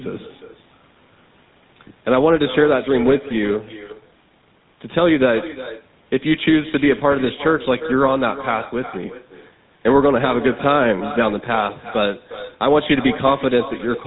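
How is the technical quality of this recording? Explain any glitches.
The technical quality is poor. Two faults run through the whole recording.

The first is echo with no canceller. Every phrase returns roughly 0.4 s later as a fainter copy, about 14 dB below the speech. The far end played the call through a loudspeaker. Its microphone caught that sound and sent it back across the network, and nothing removed it. The copy sounds thinner than the original. It trails each phrase like a shadow.

The second fault is GSM full-rate codec damage, and it is plainly audible. The speech has a buzzy, gravelly roughness. Nothing comes through above about 3.9 kHz, so the top end sounds dull and boxed in. The codec imitates the vocal tract and drives it with a sparse train of regular pulses. It keeps only a fraction of the real excitation. That coarse pulse signal causes the grit, and the damage fits the 13 kbps full-rate coder. 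The call's microphone processing trims the deepest bass, which is expected for a call and is not a fault.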